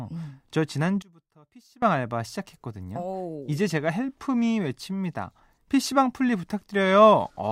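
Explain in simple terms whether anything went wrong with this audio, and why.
From 1.02 to 1.8 s the speech drops to a faint whisper, likely one channel inverted, so both sides cancel each other when mixed together.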